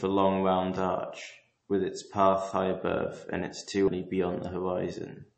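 The whole clip has that watery, swirly edge of heavy MP3 compression, likely from a low-bitrate encode, something that fits roughly 32 kbps. The encoder has chopped everything above about 8.3 kHz, so sibilants lose their top, and weak detail flickers in and out between frames.

At 3.88 s there's a CD skip. The laser jumped to a different turn of the spiral, so you hear a mute of just a few milliseconds, and then the speech picks up from a different spot on the disc.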